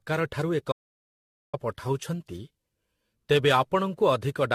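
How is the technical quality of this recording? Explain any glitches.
The quality's pretty rough, with two clear problems.

Generation loss runs the whole way through. The speech sounds swirly, hollow and smeared, attacks are blurred, and nothing survives above 14.1 kHz. That likely comes from about ten rounds of lossy AAC coding near 64 kbit/s, each pass adding fresh quantisation damage on a shifted frame grid.

There's an audio dropout to silence from 0.72 to 1.53 s, about 812 ms long. The speech cuts off mid-flow into dead digital silence with no room tone at all, then resumes abruptly. Likely the input was lost and silence was written in its place, so that stretch is gone.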